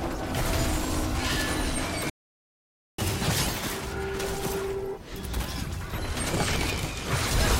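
At 2.10 s the sound cuts off in mid-flow and stays silent until 2.98 s, a gap of about 0.89 s. This playback stall most likely happened because the player ran out of buffered data or its thread was blocked, so nothing reached the output until it recovered. On a waveform it shows as a flat line between those points. On a spectrogram it is a clean vertical band of empty frequency content, with energy stopping abruptly on both edges.

When sound resumes at 2.98 s, it comes back in catch-up at higher speed. The player works through its backlog by resampling at 1.25 times normal rate until 5.98 s. Everything runs hurried and sits about four semitones sharp before snapping back to normal pitch. On a spectrogram, harmonics and formant bands over those three seconds are shifted upward and events are compressed in time. The return to normal at 5.98 s appears as a visible drop in frequency.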